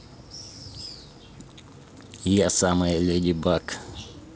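Nothing technically wrong can be heard in this speech clip. It carries G.722 wideband telephone coding at 64 kbit/s, so the sound reaches up to about 7 kHz, and any trace the coding leaves on it is faint at most.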